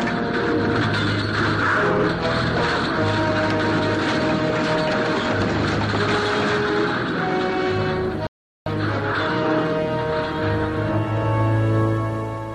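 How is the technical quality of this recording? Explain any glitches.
Two glitches interrupt the recording.

A loud pop at 6.33 to 6.35 s is a single sharp click standing roughly 10 dB above the sound, which continues underneath. It was likely caused by a brief voltage pulse from a switch or static. On a waveform it appears as a narrow spike, and on a spectrogram as a thin full-height vertical line.

A rebuffering stall runs from 8.27 to 8.66 s. Playback ran short of downloaded data, fell silent, then resumed exactly where it stopped, adding about 0.39 s without losing material. The waveform shows a flat gap, and the spectrogram a blank vertical band.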